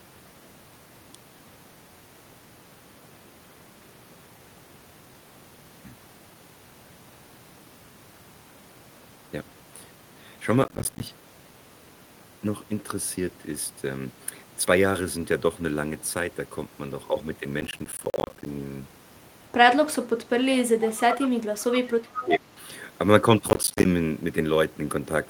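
Processor overload crackle at 10.64 to 11.03 s and 17.61 to 18.46 s: the processor misses run after run of short audio deadlines. Each miss drops in a hard-edged gap of silence, which points to buffers of roughly 10 ms, and the string of gaps sounds like gritty crackle.

Speech suppressed in double talk at 20.21 to 20.74 s, 21.15 to 21.3 s and 21.86 to 22.48 s: the speech dips by about 25, 10 and 20 dB. The likely cause is an echo canceller turning down both sides while they overlap.

Echo leak at 20.88 to 21.28 s, 21.6 to 21.79 s and 22.03 to 22.37 s: a copy of the speech returns 369 ms late. It sits about 10, 15 and 5 dB below the speech and likely slipped past a loudspeaker-side echo canceller.

Processor overload crackle returns at 23.48 to 23.85 s as another brief burst of silent-gap crackling.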